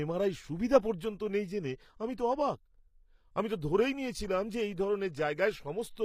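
From the start, the treble has a gritty, metallic edge that points to likely HE-AAC compression at a low rate, consistent with about 24 kbps. Upper bands are rebuilt from copies of lower ones, so harmonics misalign. A spectrogram shows repeated, blocky high-band patterns and nothing above 15.5 kHz.

At 0.98 to 1.01 s, between "এমআরআই সুবিধা" and "নেই জেনে আমি তো", pre-echo appears. Coding noise meant for a sharp onset spreads about 23 ms ahead of it, giving a brief hiss and a softened attack. The waveform shows low-level fuzz before the transient's rise.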